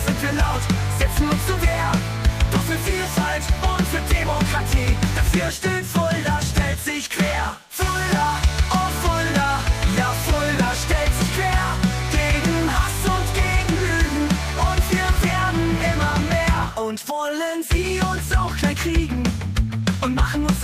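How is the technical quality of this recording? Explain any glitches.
Nothing stood out on listening; there are no glitches to explain.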